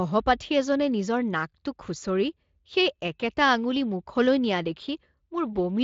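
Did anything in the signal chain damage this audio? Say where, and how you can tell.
No, nothing damaged this audio.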